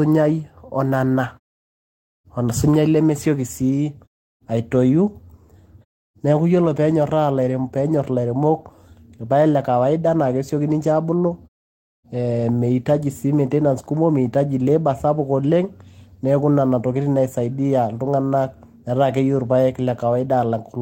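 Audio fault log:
Nothing to log here: the speech comes through with no faults, and the background going quiet in the gaps between phrases is just the pauses being muted as intended.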